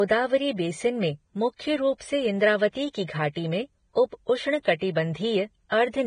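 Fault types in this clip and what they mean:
Vorbis compression: The whole clip is dull and grainy, with nothing above 9.7 kHz and treble turned into hiss. This heavy damage is likely from Vorbis coding at a low rate, which fits something around 22 kbps, roughening the speech throughout.
pre-echo: From 4.79 to 4.81 s, a short hiss runs about 25 ms ahead of a sharp onset. The codec's noise, sized for the loud attack, spreads back into the quiet moment before it, so the attack sounds smeared.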